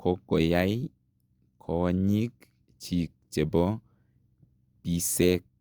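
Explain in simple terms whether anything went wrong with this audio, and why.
Listening to the recording, nothing stood out as having gone wrong with the audio at any point.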